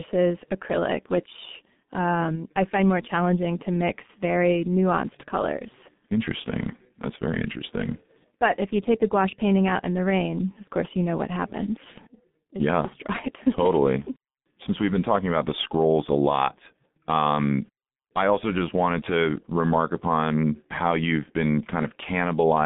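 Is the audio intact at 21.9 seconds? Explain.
No. At 21.9 s the speech is still inside the G.723.1 codec damage that runs through the whole clip. The sound fits a bitrate near 6.3 kbit/s. The band sits between about 150 Hz and 3.7 kHz, with nothing above 3.8 kHz, so the speech is muffled. A simple telephone band filter would keep consonants crisp, but here the slowly updated voice model, working in 30 ms frames, also leaves the speech hoarse and the consonants smeared.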